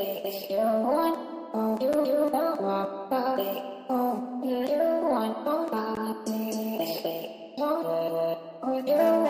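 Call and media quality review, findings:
Gap between stream segments: hard-edged dropouts to silence at 1.93 s (7 ms) and 5.95 s (16 ms), about 4 s apart. Component: segment packaging or player timeline. Mechanism: adjacent segment timestamps leave a small hole, which the player fills with silence. Spacing fits a 4 s segment length. Gaps insert time rather than remove sound, so nothing is missing, but each boundary adds a brief click-edged silence.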